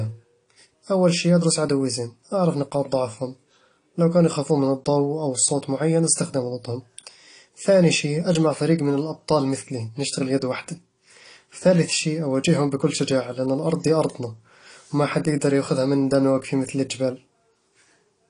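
From start to finish the speech carries plainly audible codec damage, most likely AAC compression at a low bitrate, around 32 kbps in AAC-LC. Too few bits are spread across each frame's frequency lines, so the encoder discards the top end and coarsely quantises the rest. The result sounds dull and smeared, with a warbling, fizzy edge on sibilants. A spectrogram shows a hard ceiling near 10.1 kHz.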